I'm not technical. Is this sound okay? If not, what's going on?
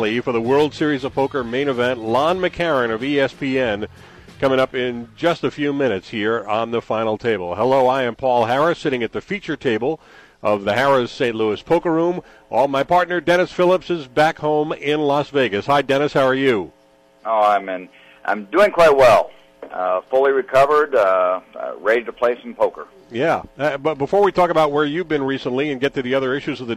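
Yes, nothing in the recording points to a technical problem, so the sound is coming through as it should.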